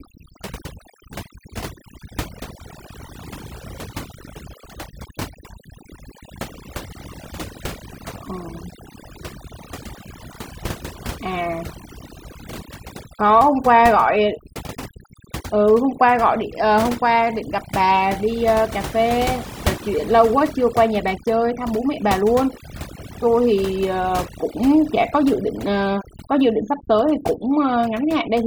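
Speech with overdone noise removal throughout: over-aggressive noise reduction leaves near-silent gaps with twinkling specks between phrases, seen as scattered isolated time-frequency dots on a spectrogram.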